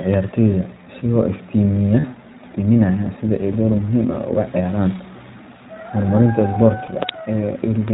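From start to finish the speech carries the sound of the iLBC codec: band-limited to 4 kHz, clear but slightly rough and synthetic, with plainly audible coding damage that fits its 15.2 kbps mode with 20 ms frames, each coded independently.

Lost iLBC frames then appear at 2.00–2.06 s (about 40 ms), 3.52–3.55 s and 6.86–6.90 s (about 20 ms each). The decoder fills each gap by repeating the last pitch cycle mixed with noise, heard as a brief held, buzzy vowel before the voice is right again almost at once.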